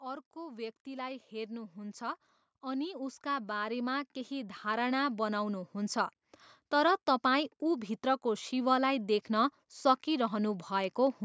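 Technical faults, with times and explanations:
0.05–6.04 s: automatic gain rising. The gain control judged the input too quiet and lifted it by about 13 dB, so speech and background swell together.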